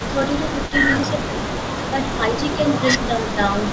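From 0.00 to 0.08 s a faint delayed copy of the speech sits under the main voice. This is an echo leak. It trails by 232 ms and is about 20 dB down. The likely cause is a far-end loudspeaker whose echo canceller let part of the pickup through. At 0.11 to 0.18 s the voice dips by around 10 dB. This is speech suppressed in double talk. Both sides were likely talking at once, and the canceller turned the talker down with the echo.

From 0.53 to 1.46 s the voice sags again in short patches, more gently, a few decibels. The echo returns at 0.67 to 0.71 s. It comes back for longer from 1.19 to 1.93 s, the same 232 ms behind. From 1.90 to 2.58 s the suppression deepens to about 10 dB in patches. From 2.70 s to the end the echo returns. From 3.08 to 3.39 s the voice is pushed down again by about 10 dB. The call path's G.722 coding passes nothing above 8 kHz.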